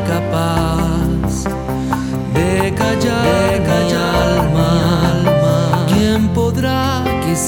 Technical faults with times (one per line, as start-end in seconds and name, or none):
2.80-6.00 doubled audio track